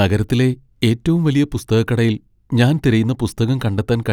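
Nothing stood out as a technical fault on listening to this speech recording.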